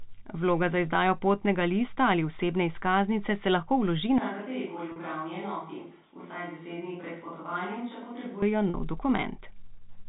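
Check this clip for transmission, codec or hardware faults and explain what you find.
Two kinds of fault are audible in this speech clip: a sudden change in microphone perspective and two short dropouts bridged by pitch repetition. The telephone-band G.711 coding underneath, with nothing above 4 kHz, is not itself a fault.

From 4.18 s to 8.42 s the sound abruptly turns roomy and hollow, thinner in the bass and about 10 dB quieter, with background noise rising to roughly 40 dB below the speech. This is likely a switch to a distant microphone, with the close microphone's feed lost.

At 4.92 s and again at 8.70 s there is packet loss with pitch repetition. Each gap lasts 40 ms, consistent with two 20 ms packets. The receiver fills it by repeating the last pitch period, which is heard as a brief held, buzzy tone before normal speech resumes.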